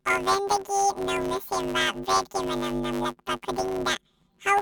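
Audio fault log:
throughout: planar audio read as interleaved. Each 10 ms block of speech plays twice at double speed, left half then right, giving a robotic 100 Hz buzz with no clear octave shift. A spectrogram shows harmonic bands every 100 Hz, and the waveform shows 10 ms segments.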